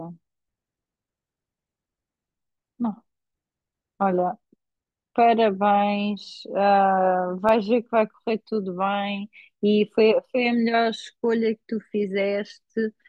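From 7.32 to 7.66 s, three CD scratch ticks cut into the speech. They fall about six times a second, once per disc revolution. A blemish there wipes out more data than error correction can rebuild. Interpolation or muting patches each gap, leaving sharp clicks under a millisecond long.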